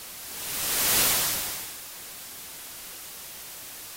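From 0.94 s to the end, the sound picks up buffer tearing. A robotic buzz at 200 Hz rides on everything that plays. That rate fits a buffer period of 5 ms. The writing program and the playback hardware have slipped out of step, so they cross inside every period. Most of each period then holds stale audio from roughly 10 ms earlier. Hard joins on both sides of that stale section repeat every period, and they make the steady rattle.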